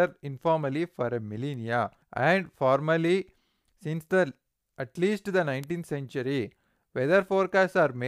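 At 1.54 s and 5.64 s the speech carries a bit error spike, where a flipped bit jumps the waveform by a power of two before it snaps back. Each is a brief broadband tick, about -31 dBFS and about -19 dBFS, consistent with one and two corrupted samples.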